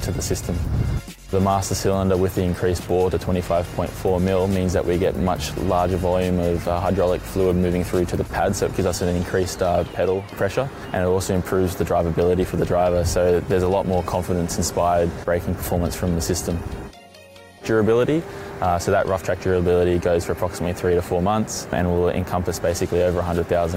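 No technical faults are audible.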